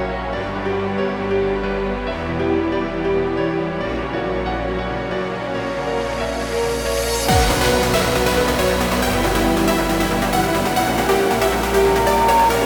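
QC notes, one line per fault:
11.27–12.52 s, loudspeaker feedback squeal: a 917 Hz tone swells over about a second until it sits roughly 5 dB above the sound. The microphone picks up its own loudspeaker, and at that frequency loop gain exceeds one, so the tone feeds itself.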